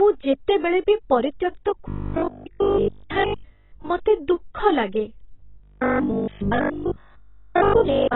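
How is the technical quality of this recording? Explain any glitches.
The recording is poor: heavy codec damage runs through the whole clip, and two long stretches turn robotic.

The AAC compression damage is present throughout. The speech is dull and band-limited, with nothing above 3.9 kHz, and has a smeared, warbling texture. The likely cause is low-bitrate AAC-LC coding at around 16 kbps. At that rate the encoder lowers its cut-off and quantises the remaining bands so coarsely that detail smears. That is different from a plain low-pass filter, which would leave the remaining band clean.

The robotic sound from repeated short buffers occurs twice. The first stretch runs from 1.88 to 3.90 s, just after "ଯେତେବେଳେ ବି ପରିତ୍ୟକ୍ତ" and ending before "ମୋତେ ଦୁଃଖ ଲାଗେ". The second runs from 5.44 s, right after "ମୋତେ ଦୁଃଖ ଲାଗେ", to the end of the clip. In both, the speech becomes a rigid, metallic 50 Hz buzz that follows the speech only roughly. 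A 50 Hz rate means a 20 ms chunk repeating. The likely cause is audio arriving too seldom, so the player loops its last buffer and skips the real audio, with most of the sound being repeats. Mains hum would sit underneath the speech. Here the buzz comes from the repeats themselves.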